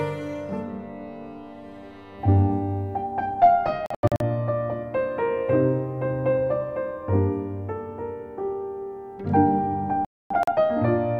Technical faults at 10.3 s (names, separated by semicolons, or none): digital broadcast dropout